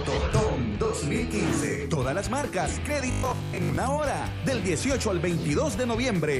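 From 3.11 to 3.77 s the sound goes robotic, a rigid metallic buzz locked at 50 Hz. That's likely robotic sound from repeated short buffers: a 20 ms slice looping over and over, with most of the real audio in that stretch skipped.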